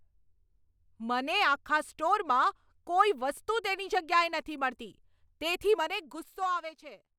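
From 5.68 s to 6.69 s the speech drops by roughly 15 dB, and the fade carries zipper noise: the gain moves in unsmoothed 2 dB steps, around seven per second, so each jump leaves a faint tick riding on the voice. A waveform shows the envelope descending as a staircase rather than a slope, and a spectrogram shows thin vertical broadband lines at every step across the fade.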